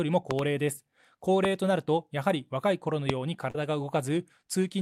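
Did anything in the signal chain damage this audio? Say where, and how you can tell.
Yes. Sharp pops sit on top of the sound and stand well clear of it: a double pop from 0.31 to 0.41 s, about 15 dB above the signal, then single pops at 1.45 to 1.47 s and 3.10 to 3.12 s, each about 20 dB up. The sound continues underneath each one. This is loud pop damage, likely from the analogue wiring, a connector, a switch or static injecting a voltage step that the following circuitry turned into a brief thump.

At 3.50 to 3.55 s a short smear replaces the real audio for about 40 ms before it blends back in. That is short concealed packet loss at the network stage. A packet's worth of audio arrived too late or not at all, so the decoder extended the preceding sound to cover the gap.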